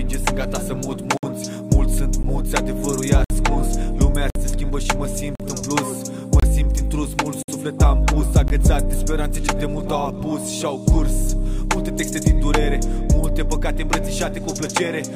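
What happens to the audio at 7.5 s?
Right around there you get a gap between stream segments: the sound drops out completely from 7.43 to 7.48 s, a hole of about 57 ms with hard edges on both sides. What's happening is that two adjacent chunks of the stream don't quite meet on their timestamps, so the player pads the gap with silence. Nothing is actually missing; the audio just resumes a beat late after that abrupt cut.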